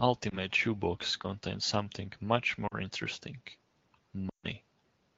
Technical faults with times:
0.30-0.37 lost AMR speech frames
2.67-2.74 lost AMR speech frames
4.29-4.46 lost AMR speech frames

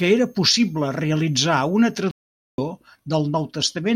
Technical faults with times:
0.00-2.00 switching supply whistle
2.11-2.58 playback stall

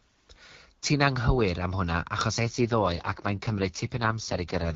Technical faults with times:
2.40-4.75 AMR rate drop

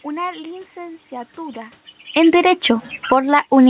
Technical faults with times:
2.01-3.70 automatic gain falling

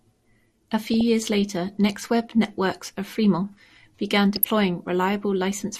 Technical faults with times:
0.00-5.80 MP2 compression
0.94-1.01 DAB burbling
4.36-4.45 DAB burbling

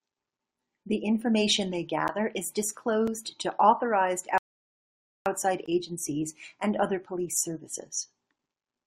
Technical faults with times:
2.08 block of digital silence
3.07 block of digital silence
4.38-5.26 rebuffering stall
5.66 block of digital silence

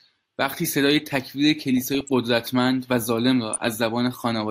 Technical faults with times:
1.77-2.13 DAB burbling
3.53-3.58 DAB burbling

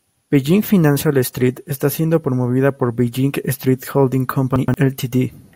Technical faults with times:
4.56-4.74 chunks out of order

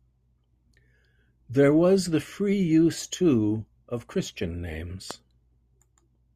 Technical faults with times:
5.11-5.13 loud pop

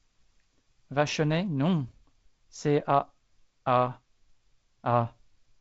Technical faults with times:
none

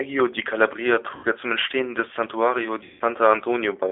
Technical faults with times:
0.00-3.91 G.729 codec
1.15-1.26 VoIP packet loss concealed by the speech codec
2.85-3.02 VoIP packet loss concealed by the speech codec

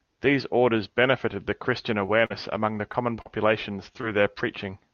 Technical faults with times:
2.05-2.09 short concealed packet loss
2.25-2.32 burst of packet loss
2.92-3.27 short concealed packet loss
4.01-4.05 short concealed packet loss

